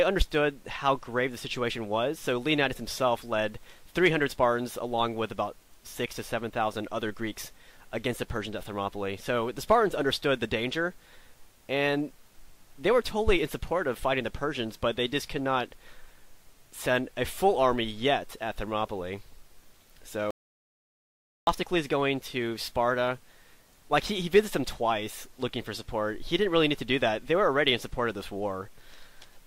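A single audio dropout to silence runs from 20.31 to 21.47 s. The sound cuts off mid-flow and about 1.17 s of silence follows, with no room tone beneath it. Recording then resumes abruptly. The likely cause is a brief loss of the input signal while the recorder kept writing, so whatever occurred in that interval is unrecoverable.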